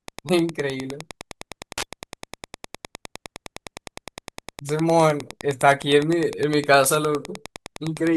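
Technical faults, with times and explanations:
Throughout, Wi-Fi interference: a steady ticking runs under the speech at roughly 20 dB below it, repeating every 102.4 ms, close to ten ticks a second. A nearby Wi-Fi radio's beacon transmissions are picked up and rectified by the audio circuitry, so each beacon becomes a short click. On a spectrogram this shows as evenly spaced thin vertical lines spanning a wide frequency range, and on the waveform as a regular train of small spikes.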